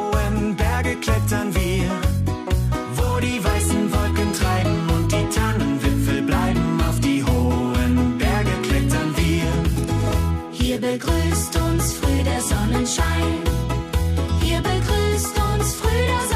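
No technical faults can be heard anywhere in it.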